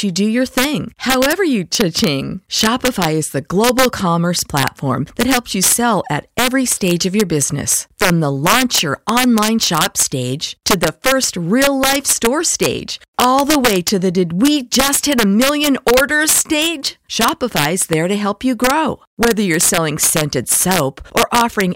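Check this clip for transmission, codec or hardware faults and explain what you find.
The speech has one fault, integer overflow, present throughout. Loud peaks snap into harsh, violent cracks, sharper than clipping: a gain pushed about 6 dB too hot makes roughly half a percent of samples wrap to the opposite sign instead of limiting.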